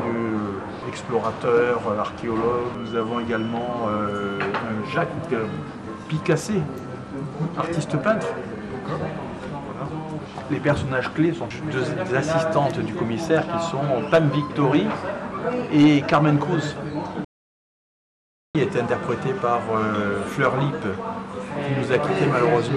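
At 17.25 s the audio drops out to silence and stays dead until 18.55 s, a gap of about 1.3 s with no room tone at all. The likely cause is a lost input, with the recorder writing silence meanwhile.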